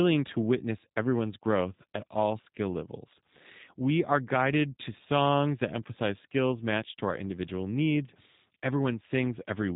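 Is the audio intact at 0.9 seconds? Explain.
No. At 0.9 s, as through the whole clip, the speech carries G.729 codec damage, plainly audible. The codec rebuilds each 10 ms frame from a vocal tract filter, a pitch predictor and a handful of coded pulses rather than the original waveform, so the sound comes out rough and slightly synthetic, which fits an 8 kbit/s G.729A stream. Nothing above about 3.8 kHz survives, leaving it narrowband and dull.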